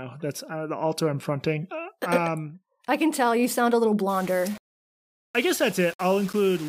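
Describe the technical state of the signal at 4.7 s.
Low bit depth without dither runs from 4.09 s to 6.68 s, so it covers 4.7 s. The speech turns grainy and gritty, with a harsh distortion that tracks the signal, and its quietest parts collapse toward silence or sputter. The likely cause is a signal rounded to very few levels with no dither, which fits about 6 bits. The rounding error rises and falls with the sound and sits only roughly 20 dB below it.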